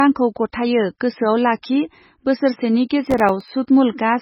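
Throughout the speech, everything above 5.6 kHz is missing and the remaining sound is watery and swirling, the kind of heavy damage that fits MP3 compression at a bitrate around 16 kbps, likely starved of bits. The encoder cuts the treble and lets weak frequency lines flicker between frames. That constant, whole-clip character sets it apart from the brief events below.

At 1.62 s and 2.89 s, pre-echo appears as a hiss of about 13 and 14 ms that leads a sharp attack. The codec spread noise sized for the loud onset across its whole block, so the hiss comes before the attack, not after it.

From 3.07 to 3.48 s comes processor overload crackle, a gritty tearing made of tiny silent dropouts. The pattern fits roughly ten short buffers of about 1.5 ms each going unfinished. Unlike a codec artefact, it is a cluster of hard-edged gaps that stops when the load passes.

At 3.67 s, pre-echo returns as a smear of about 12 ms before another attack, with the same cause as before.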